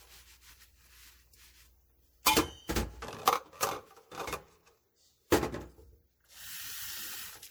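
From start to finish, the sound has likely passed through repeated MP3 encoding, with about three lossy passes in a row at a rate consistent with 96 kbit/s, which is generation loss. Each decode and re-encode quantises the signal again on a shifted frame grid, so the noise and missing spectral slices build up. The sounds come across swirly and hollow, with a smeared, watery texture, and sharp onsets lose their edge and blur.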